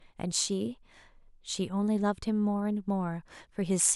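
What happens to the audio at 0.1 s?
At 0.1 s the speech plays through intact, with no dropout, click, distortion or other fault at that moment.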